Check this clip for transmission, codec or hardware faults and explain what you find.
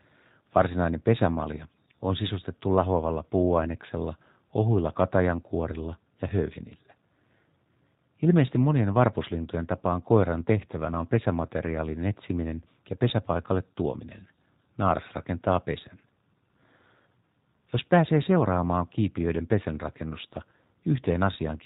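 One codec fault runs through the whole speech clip: G.729 compression damage, plainly audible from start to finish. The speech is rebuilt from a vocal tract filter, pitch prediction and a few pulses per 10 ms frame, which fits the 8 kbit/s G.729A variant. It sounds slightly rough, buzzy and synthetic. A spectrogram shows nothing above 4 kHz and smeared, grainy harmonics.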